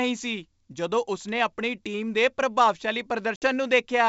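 Speech carried over G.722 wideband coding at 64 kbit/s, which sounds clean, has packet loss on an ADPCM call from 3.36 to 3.44 s, just after "ਟੀਮ ਦੇ ਪ੍ਰਭਾਵਸ਼ਾਲੀ". It is a hard-edged silent hole of 60 ms, about three packets' worth. Unlike a plain dropout, the sound then resumes slightly distorted. The decoder's adaptive predictor and step size have fallen out of step with the sender's and take some tens of milliseconds to settle.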